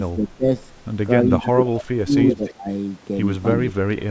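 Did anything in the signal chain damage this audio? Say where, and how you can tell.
Yes, the call processing stage did. Speech suppressed in double talk shows up at 0.14 to 0.46 s, 1.42 to 1.6 s, 1.82 to 2.16 s and 2.36 to 2.67 s. The voice ducks by roughly 20 dB, about 15 dB in the last one. That's likely the echo canceller meeting both sides talking at once. It couldn't tell this talker from the loudspeaker echo, so it pulled everything down together.

There's also an echo leak at 1.44 to 1.83 s and 2.29 to 2.53 s. You hear a second copy of the voice trailing it by about 286 to 287 ms. The first pass sits around 15 dB below the speech, but the second is only about 5 dB down. The likely story is a far end on a loudspeaker whose canceller didn't scrub what its mic picked up, so the leftover came straight back down the line. The band tops out at 8 kHz, which is just the call's own mic chain.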